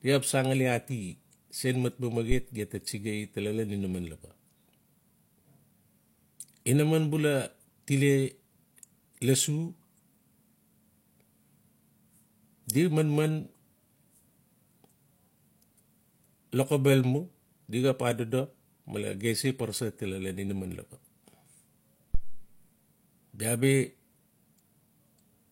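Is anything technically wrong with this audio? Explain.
Yes, there are two phantom power thumps, at 2.32 to 2.47 s, between "sen mat" and "gem ta", and at 22.14 to 22.52 s. A supply switching on the live input pushes a voltage step through the coupling capacitors. Each is a deep thump decaying in about 34 ms and 84 ms, seen as a large low-frequency waveform swing and a bright band at the spectrogram's bottom.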